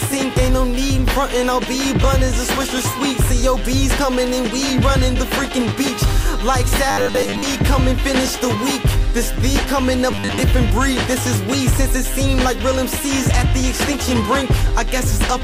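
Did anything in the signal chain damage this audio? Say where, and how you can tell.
Yes. Robotic sound from repeated short buffers appears from 6.91 to 7.43 s and again from 10.11 to 10.41 s. In both stretches the sound turns into a rigid, metallic buzz locked at 100 Hz, with most of the original material missing. The stage is likely the driver or buffer: when fresh audio stopped arriving in time, the last 10 ms chunk was played over and over, and that fixed repetition rate is what imposes the steady 100 Hz pitch.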